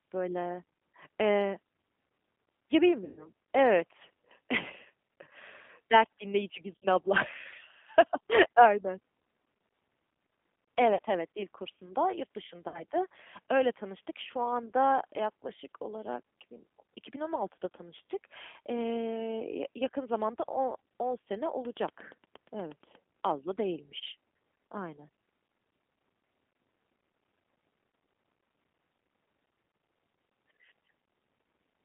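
From start to finish the speech sounds slightly rough and synthetic, confined to a narrow telephone band of roughly 200 Hz to 3.5 kHz, with the damage plainly audible. That is the G.729 codec, here the G.729A variant at 8 kbit/s. It models each short frame with a vocal tract filter, a pitch predictor and a handful of pulses rather than coding the waveform itself, so fine texture is lost and everything above the band is discarded.

At 3.05 to 3.28 s, 6.78 to 6.86 s, 10.95 to 10.99 s and 12.68 to 12.83 s the speech is stretched into a buzzy tone or coloured noise that fades and sounds weak or distorted for a moment after it resumes. This is VoIP packet loss concealed by the speech codec. About 120 ms of audio went missing in the first gap, 60 ms in the second and fourth, and 40 ms in the third. The decoder filled each gap by extrapolating from its last pitch and filter while lowering the gain, and because every frame builds on the previous one, the damage lingers briefly after the audio returns.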